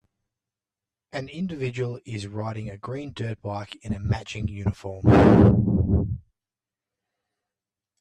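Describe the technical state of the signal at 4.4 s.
At 4.4 s the speech carries a channel delay with comb filtering that runs through the whole clip. One channel arrives roughly 10 ms behind the other, and when the two are folded to mono, the shared content cancels at regularly spaced frequencies, starting near 50 Hz and repeating about every 100 Hz above that. The result is a hollow, phasey coloration with fixed notches.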